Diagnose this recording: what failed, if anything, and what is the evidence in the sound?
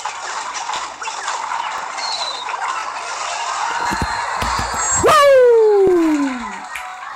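Overlapping chunks at 0.76, 1.78, 2.81, 4.85 and 5.87 s: at the buffer stage, one-second chunks overlap, replaying 23 ms at each join as a stutter.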